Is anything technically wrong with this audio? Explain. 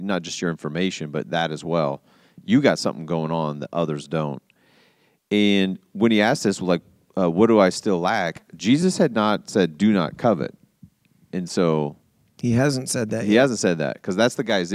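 Yes. At 8.82 s, between "do I still lack" and "had not said", and again at 10.21 s, the speech freezes for about 0.7 ms, a flat step with barely any click. This is an underrun with held sample: the output buffer emptied, the converter held its last value, and playback resumed where it stopped with nothing lost. Each gap is 32 samples long.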